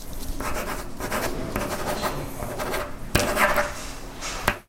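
At 1.25 s the audio jumps forward, the mark of compressed frames skipped. A stretch of roughly a tenth of a second never plays, which points to about four whole codec frames lost from the stream or discarded by the decoder as corrupt. The sound simply resumes later than it should. The jump passes quickly but leaves a small gap in continuity.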